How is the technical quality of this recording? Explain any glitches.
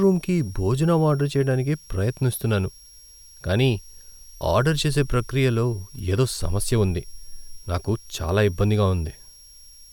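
The recording has one persistent fault. A switching supply whistle runs through the whole speech clip. A switching power supply is cycling in an audible burst mode or beating with another supply. It produces a thin, high tone drifting between about 5.56 and 5.66 kHz. It sits well below the speech.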